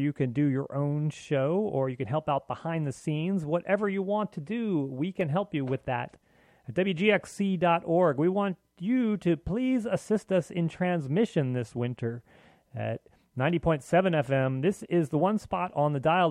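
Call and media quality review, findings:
Sharp single clicks at 5.21 s and 13.50 s. Likely dropped samples: a fraction of a millisecond missing, so the waveform jumps abruptly to a later value.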